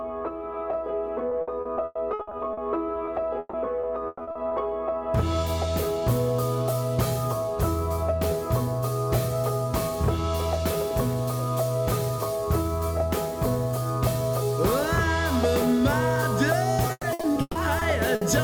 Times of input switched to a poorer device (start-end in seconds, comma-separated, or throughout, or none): none